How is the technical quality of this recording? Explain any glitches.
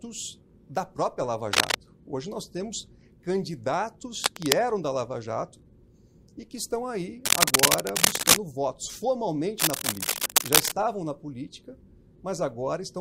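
Four bursts of scratchy, rustling noise break into the sound, at 1.53 to 1.75 s, 4.24 to 4.53 s, 7.25 to 8.37 s and 9.58 to 10.74 s. Each is louder than the sound beneath it, and the third is clearly the strongest. This is cable scratch noise, likely from a worn cable, connector or control being moved, so that rapid changes in its contact resistance add dense, uneven crackle to the signal.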